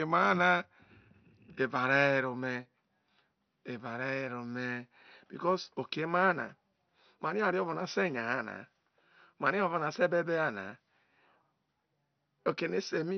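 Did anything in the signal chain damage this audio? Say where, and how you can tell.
Yes, at the codec stage, throughout the speech. Nothing survives above 6.1 kHz, and the remaining bands sound gurgly and granular. This is likely MP2 compression, heavily damaged, which fits a low rate near 48 kbps. Starved of bits, upper sub-bands are switched off and the rest quantised coarsely.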